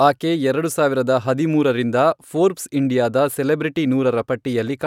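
No technical faults are audible.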